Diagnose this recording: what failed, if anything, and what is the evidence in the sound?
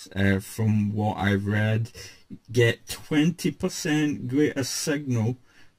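Channel delay (comb filtering) at the driver or buffer stage. One channel lags by around 10 ms before mono summing. Notches from around 50 Hz upward sound hollow throughout.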